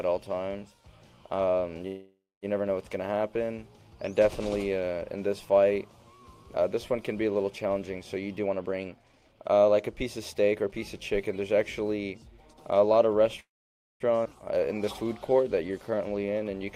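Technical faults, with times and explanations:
1.87–2.45 s and 13.40–14.03 s, call audio freeze: Both times the sound halts and the last fragment carries on as a fading buzz or hiss. The first fill lasts 0.55 s, with its final 0.24 s gone silent. The second lasts 0.60 s and is silent for 0.55 s of that. Playback then resumes exactly where it stopped, so nothing is lost, only pushed later. This is the likely sign of delayed packets draining the jitter buffer.
8.40–10.73 s, jitter buffer speed-up: Across these 2.3 s the audio plays at about 123% speed while keeping its pitch, so it sounds hurried and compressed. The receiver had more buffered audio than its target after late packets arrived in a bunch. It trimmed short pitch-period-sized slices over and over, roughly half a second in total, to bring the delay back down.
14.24–14.28 s, skip ahead: Playback jumps forward here, and roughly 0.4 s of audio vanishes. 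Only a 9 ms bridge joins the two sides, so the join is nearly direct and a piece of the sound is simply missing. That stretch was dropped while later audio was already queued, either lost in transit or discarded by an overfull jitter buffer, and this cuts the accumulated delay.
14.54–16.66 s, jitter buffer slow-down: The audio drags at about 89% speed with unchanged pitch, so sounds are drawn out and a slight warble may creep in. The buffer was running low or had just raised its target delay, so the receiver repeated single pitch periods and bits of pause many times. This added about 234 ms of audio to rebuild its reserve.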